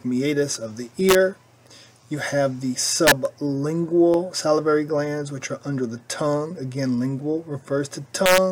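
Harsh integer overflow cracks strike the audio at 1.09 to 1.15 s, 3.07 to 3.12 s and 8.26 to 8.38 s. Peaks pushed about 2 to 3 dB past the integer limit wrap to the opposite sign instead of being limited. Each crack sounds far sharper than clipping.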